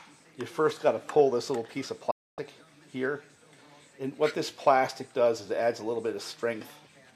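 At 2.11 s the sound fades out over about 8 ms into a digital broadcast dropout, returning at 2.39 s. The receiver muted while frames failed, which fits roughly eleven lost frames, discarding about 264 ms. A spectrogram shows a clean empty band; the waveform drops flat.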